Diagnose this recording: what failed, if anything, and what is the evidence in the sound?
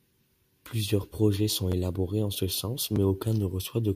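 Repeated buffer at the driver or buffer stage, twice. At 1.72 s after "projets sont" and at 2.96 s after "en ce sens", an 11.6 ms chunk plays again with a hard join, heard as a brief click-stutter. That length fits a 512-sample buffer replayed when new audio arrived late.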